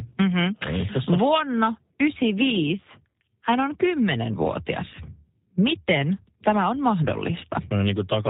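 From start to finish the speech carries G.729 codec damage, plainly audible. Nothing above 4 kHz survives, and each 10 ms frame is rebuilt from a vocal tract model, pitch prediction and a handful of pulses, so the voice sounds rough and faintly synthetic, consistent with an 8 kbit/s G.729A stream. Plain band-limiting would dull the top end but leave the voice natural. Here the grainy, modelled texture gives it away.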